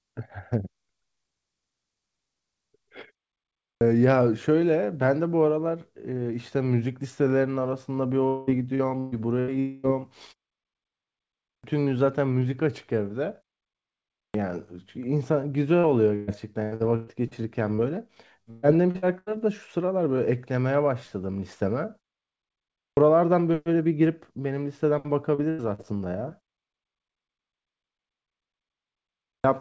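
A clipped start after a pause first comes at 3.45 to 3.81 s. The output device drops into a low-power state during the preceding 0.42 s gap and needs time to wake up again. The onset of the next sound is therefore swallowed, about 0.36 s of it, so the audio snaps in abruptly from silence.

Repeated packet loss (robotic sound) runs from 8.28 to 9.51 s. Four gaps close together, the longest 193 ms, are each patched by extending the previous sound. About a third of the stretch is synthetic, giving a choppy, metallic texture with pieces missing.

Right after, from 9.60 to 9.86 s, about 240 ms of audio is replaced by a continuation of the last sound that smears and decays without reaching silence. The likely cause is a long network dropout, and the audio resumes later with that portion gone.

The clipped start recurs at 11.32 to 11.64 s, after a pause of about 1 s, and again at 13.98 to 14.34 s. 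Each time roughly a third of a second of the onset is lost.

Repeated packet loss returns at 15.79 to 17.34 s, with six gaps, the longest 121 ms. It comes back at 18.42 to 19.29 s, with five gaps, the longest 123 ms. Both stretches have the same stuttering, robotic character.

Between them, a short concealed packet loss at 17.75 to 17.81 s fills a 40 ms hole by extrapolating the preceding sound and blending back in. It is heard as a brief smear or wobble.

A further clipped start falls at 22.65 to 22.97 s.

A short concealed packet loss at 25.34 to 25.41 s is followed by a burst of packet loss at 25.50 to 25.62 s. In the burst, about 80 ms went missing, and the receiver held the last sound as a fading buzz or hiss before skipping ahead. A further short concealed loss at 25.75 to 25.81 s makes this stretch sound briefly wobbly.

The last clipped start, at 29.09 to 29.44 s, follows a 2.8 s pause. 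Throughout, the G.722 call path leaves nothing above 8 kHz.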